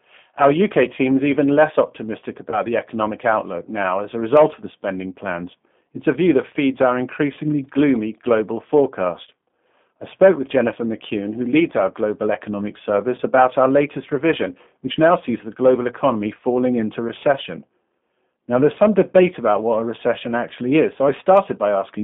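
Throughout, the sound carries G.729 codec damage, and it is plainly audible. The band runs only from about 150 Hz to 3.5 kHz. The speech is rebuilt from a vocal tract filter, a pitch predictor and a few pulses per short frame. So it comes out rough and faintly synthetic. The thin, coded quality fits an 8 kbit/s codec, likely the G.729A variant.

At 2.50 to 2.61 s, after "is even less optimistic" and before "the economic outlook now", there is VoIP packet loss concealed by the speech codec. About 20 ms of audio went missing, which fits a single lost packet. The decoder stretched its last pitch and filter to fill the gap, lowering the gain as it went. Because each frame builds on the previous one, the distortion lingers past the gap. The same fault recurs at 13.16 to 13.20 s, after "leads our global economic" and before "about our latest revision". Again about 20 ms is lost and filled in by the decoder.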